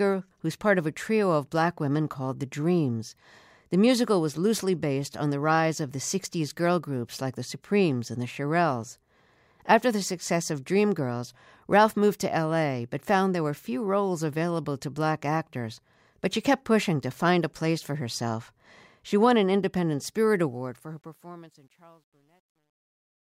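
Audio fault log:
20.46–23.24 s truncation distortion on a fade: as the smooth fade-out starting near 20.5 s sinks toward silence, the level steps coarsen without dither, fitting roughly an 11-bit stage. From 21.46 s the waveform collapses into square steps, sounding gritty.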